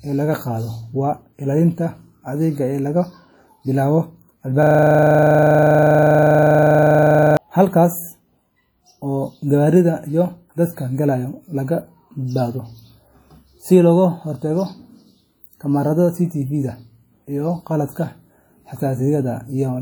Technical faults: WMA compression; system hang loop

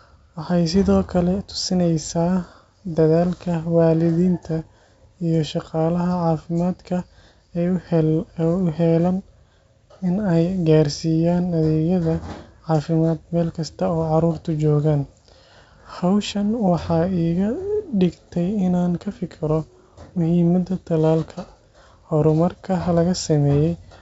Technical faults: none

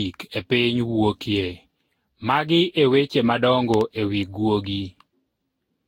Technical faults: generation loss; loud pop

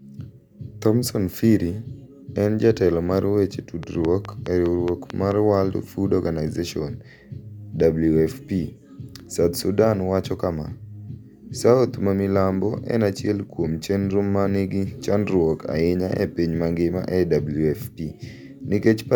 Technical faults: train of clicks

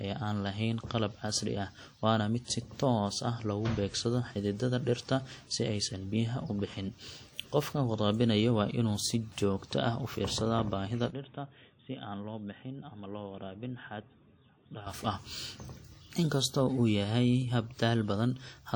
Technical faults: WMA compression; input switched to a poorer device

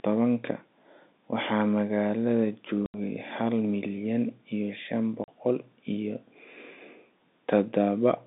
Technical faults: packet loss filled with silence

